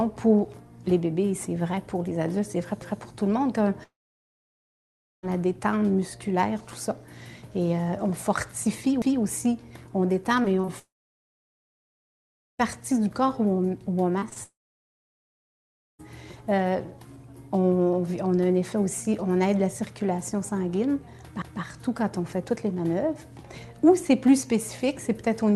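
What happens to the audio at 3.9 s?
At 3.9 s the sound breaks off: the last bit of audio is stretched into a brief buzzy hiss that fades within less than a tenth of a second, leaving near-silence until the audio resumes at about 5.25 s, with nothing from the gap recovered. This is a long network dropout, likely lasting from 3.83 s: about 1.4 s of packets never arrived, and the receiver's concealment smeared the final sound before giving way to quiet.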